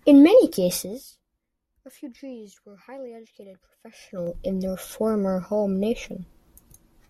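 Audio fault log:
0.77–1.20 s and 3.84–4.35 s, zipper noise: a fast ticking rides on the speech as the level first falls by roughly 20 dB, then rises by a similar amount. The fader moves here are applied in coarse jumps of about 4 dB on the way down and about 3 dB on the way up, around ten a second, with no smoothing. Each abrupt jump puts a small click into the waveform, and the rapid series of clicks sounds like a zip.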